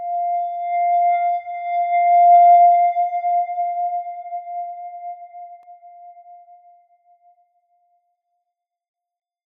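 At 5.63 s there's a block of digital silence, a gap of about 1.3 ms where the signal just drops to zero and snaps back. That length fits a 64-sample buffer that didn't get filled in time, and it comes across as a single sharp tick.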